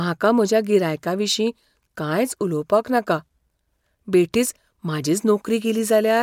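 No technical faults can be heard anywhere in this speech recording. There is nothing in it that needs a timestamp or a fix.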